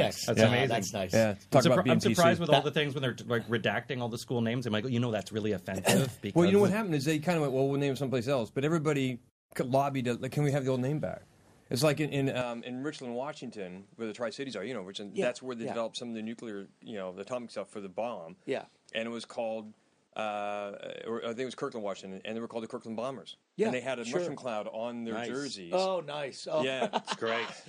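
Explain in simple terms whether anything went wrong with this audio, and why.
At 12.4 seconds, the sound turns duller and a bit quieter, with no gap, and stays that way to the end. This was likely an input switched to a poorer device.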